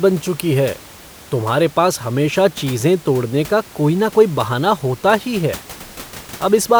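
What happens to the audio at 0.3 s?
Nothing goes wrong at 0.3 s; the audio is intact there, with only the room's background noise sitting about 21 dB below the speech.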